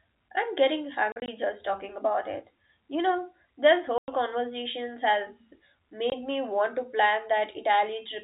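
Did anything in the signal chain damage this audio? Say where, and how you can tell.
Yes, at the network stage: packet loss filled with silence. The audio drops to hard-edged silent gaps: from 1.12 to 1.28 s, after "I'm getting", about 80 ms of dropouts scattered over 160 ms, the longest 40 ms; a 100 ms gap at 3.98 to 4.08 s after "know this"; and a 20 ms gap at 6.10 to 6.12 s before "me want to". Every gap is a multiple of 20 ms, which fits 20 ms packets, so the receiver is playing silence where packets failed to arrive. The G.711 A-law telephone band shows no added damage of its own.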